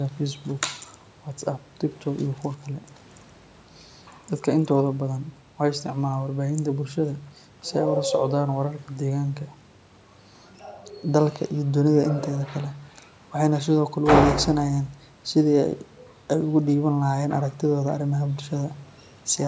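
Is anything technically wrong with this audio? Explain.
No, nothing is technically wrong with this speech.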